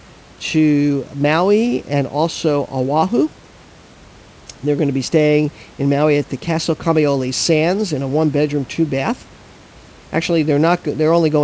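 Speech, and nothing is technically wrong with it.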